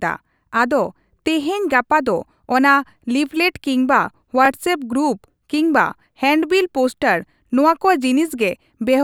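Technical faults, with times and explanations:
1.43–1.46 s, 4.46–4.48 s and 7.48–7.50 s, overlapping chunks: a brief stutter or click recurs every 3.0 s. Each new 3.0 s chunk starts about 21 ms before the previous one ended, so that sliver of speech plays twice at every join.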